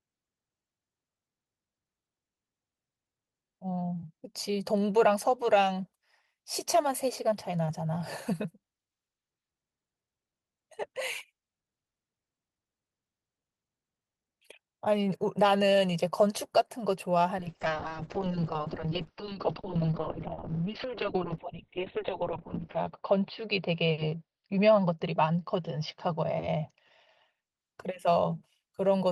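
From 17.39 s to 27.61 s there's a call bitrate drop. The codec gets starved of bits, which fits a fall from around 32 kbps to about 7 kbps, and the top end collapses from 20 kHz to 4 kHz. The speech turns muffled and rough, worst for about four seconds.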